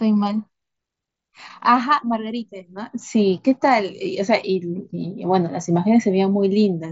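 No technical faults can be heard in this speech. It carries the band limit of the Bluetooth mSBC headset codec, with nothing above 7.7 kHz and only light codec texture on the louder sounds.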